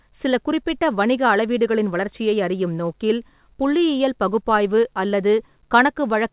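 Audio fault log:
No fault to log; the speech comes through a WebRTC call path with nothing above 4 kHz.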